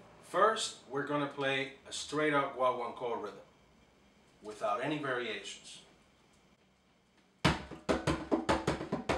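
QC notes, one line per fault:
Nothing stood out on listening.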